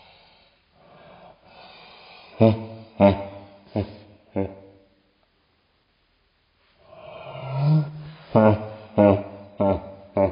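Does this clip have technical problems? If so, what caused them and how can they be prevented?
Yes. A wrong sample rate runs throughout. Everything plays at one third speed and about 19 semitones lower, which fits 48 kHz audio played at 16 kHz. Always match or convert the playback rate to the recording rate.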